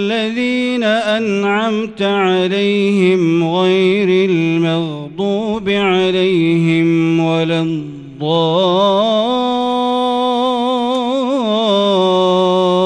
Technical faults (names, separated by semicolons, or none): none